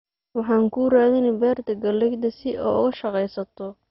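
MP2 compression, likely the cause, runs throughout this speech: nothing is heard above 5.6 kHz, so upper sub-bands are dropped and the rest coarsely quantised. The result is dull, with heavy gurgling, granular distortion, which fits a bitrate near 32 kbps.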